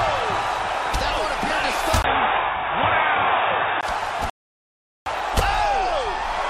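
From 2.02 s to 3.83 s the sound turns dull and boxy, with nothing above 3.8 kHz, and the full range returns at 3.83 s. The likely cause is an input switched to a poorer device mid-recording. A plain low-pass filter or codec bandwidth drop would not explain the other clues: a 20 ms silence at the 2.02 s switch and a faint new background noise, roughly 40 dB below the signal, while the overall level stays about the same.

At 4.30 s a rebuffering stall stops the audio dead, and silence holds until 5.06 s, adding about 0.76 s to the timeline. The player ran out of downloaded data and waited for more. When playback resumes, it picks up exactly where it stopped. That separates it from a dropout or packet loss, where the gap swallows part of the material and the sound jumps ahead. Here nothing is missing and only time is added.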